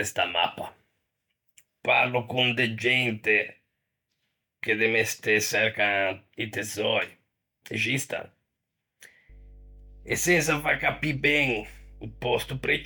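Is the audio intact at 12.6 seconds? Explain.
No, at 12.6 s the speech sits on top of mains hum, which runs from 9.29 s to the end of the clip. A ground loop or nearby transformer is leaking the 50 Hz power line into the signal, so you hear a steady low drone at roughly 20 dB below the speech.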